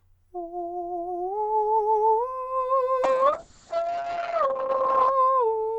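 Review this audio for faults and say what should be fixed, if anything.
A call bitrate drop hits the music from 3.05 s to 5.17 s. The top end collapses from a full 20 kHz band to about 8 kHz, and the texture turns coarse and watery for roughly 2 seconds. That fits the encoder being squeezed from around 128 kbps to about 6 kbps after the bandwidth estimate fell. A plain low-pass filter would sound dull but stay clean, and packet loss would leave gaps or clicks. Here the sound is continuous but grainy. Setting a higher minimum bitrate and smoothing the bandwidth estimator's reaction would prevent this.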